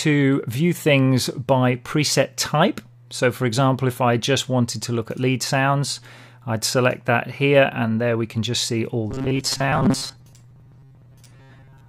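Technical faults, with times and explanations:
9.11–11.89 s: robotic sound from repeated short buffers. The sound turns into a rigid, metallic buzz at 134 Hz that only loosely follows the original. The likely cause is audio arriving too seldom, so a slice of about 7.5 ms is looped, replacing most of the real signal.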